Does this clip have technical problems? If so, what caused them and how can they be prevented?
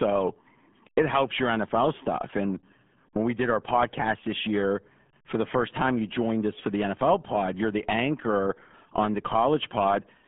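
Yes. Throughout, the RealAudio 14.4 codec leaves speech muffled and gargly, consistent with roughly 8 kbit/s coding. A spectrogram shows a hard ceiling near 3.7 kHz. Prevent it by keeping a higher-bitrate, full-bandwidth source.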